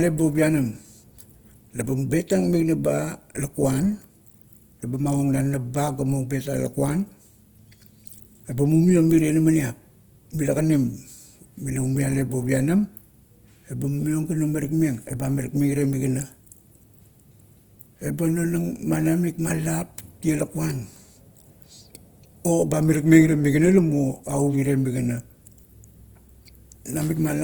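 From start to finish the speech has a plainly audible grainy, rough texture, with the detail turned noisy rather than clean, while the bandwidth stays full up to about 20.2 kHz. That points to Opus compression, likely in its CELT mode at a low rate around 24 kbps, filling thin bands with noise.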